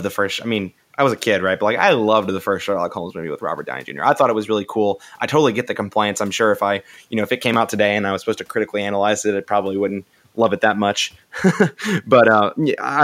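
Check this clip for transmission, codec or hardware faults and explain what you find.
Nothing audible points to any transmission, codec or hardware fault in this speech recording.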